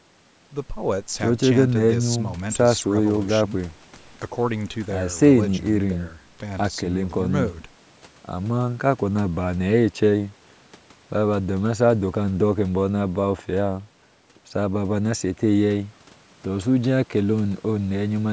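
Speech with no technical faults to report.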